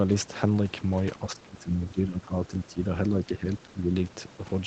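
Speech suppressed in double talk, from 1.29 to 2.87 s and again from 3.09 to 3.94 s: the speech dips by up to about 15 dB, then about 10 dB, likely because an echo canceller mistook it for loudspeaker echo while both sides talked.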